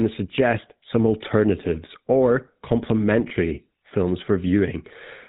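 A GSM full-rate codec runs across the whole recording, modelling the vocal tract and exciting it with regularly spaced pulses, which fits the 13 kbps full-rate coder. The damage is plainly audible: the speech carries a buzzy, gravelly roughness, and nothing comes through above 4 kHz.

From 3.28 to 3.31 s, lost GSM frames were concealed by repeating the last good frame's settings, which points to a single missing 20 ms frame. The speech briefly turns into a rough, metallic ring before normal decoding resumes.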